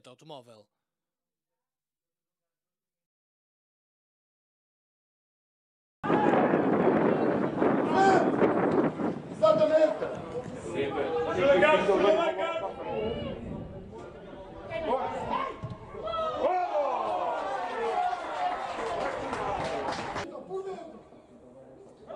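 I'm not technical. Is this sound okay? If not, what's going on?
No. From 12.0 to 12.36 s there is zipper noise: the volume drops noticeably, but in around fifty tiny steps a second instead of one smooth slide. Each step leaves a faint click, so the drop sounds like a brief ticking zip.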